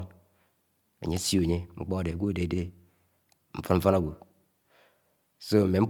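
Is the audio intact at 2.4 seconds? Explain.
No. At 2.4 seconds, as across the whole clip, the speech carries generation loss. It sounds swirly, smeared and hollow, with blurred attacks. The likely cause is about four passes through an MP3 codec near 128 kbit/s. Each re-encode quantises again on a shifted frame grid, so noise and spectral holes pile up. Nothing remains above 20.1 kHz.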